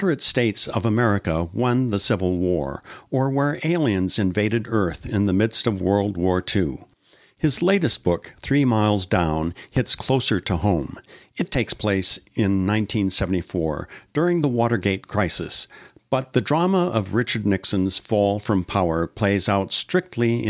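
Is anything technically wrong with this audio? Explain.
No, nothing technically wrong turns up anywhere in this speech recording, so there's no fault to point to here.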